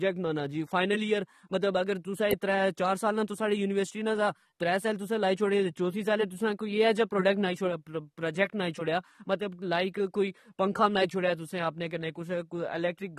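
Throughout the speech, the encoding was likely squeezed hard by AAC compression, which fits an AAC-LC stream at around 32 kbps. The codec discards everything above 13.7 kHz and coarsely quantises what remains, so the audio sounds dull and smeared, with plainly audible warbling and fizz on sibilants.

At 2.31 s, just after "جی فائنل ایئراگر تسا" and before "ترہ چار سال نا", a nearby switch or discharge likely arced onto the line. This electrical switching spike lands on top of the speech as a sharp snap or a tight cluster of clicks.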